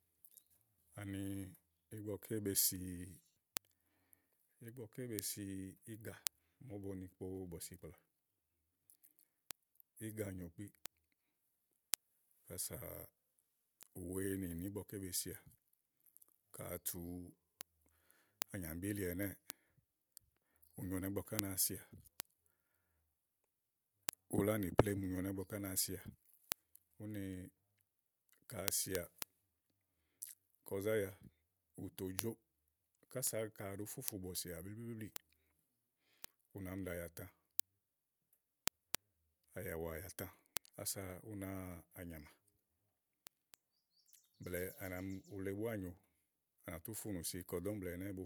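From 0.33 s to 48.13 s, word clock ticks recur roughly every 0.3 s, around two hundred sharp clicks. The receiving clock runs about 70 ppm off the sender's, apparently slipping one sample per tick. A spectrogram shows evenly spaced thin vertical lines, and the waveform shows tiny single-sample steps.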